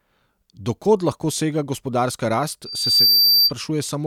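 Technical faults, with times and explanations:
2.65–3.52 s, loudspeaker feedback squeal: just after "lahko sega gospodarska rast", a pure tone near 4.7 kHz swells over roughly 0.4 s to about 10 dB above the speech, because the microphone is re-amplifying its own loudspeaker with loop gain above one at that frequency.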